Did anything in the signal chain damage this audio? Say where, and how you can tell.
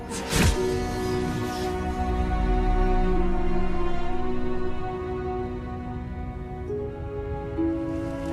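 No, the chain caused no damage.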